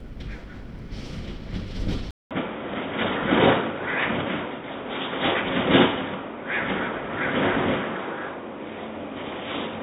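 At 2.11 s the sound cuts out for 200 ms, then returns dull and boxy through to the end, with nothing above 3.8 kHz, a modest level shift and faint new background noise. The likely cause is an input switched to a poorer, narrower-band device.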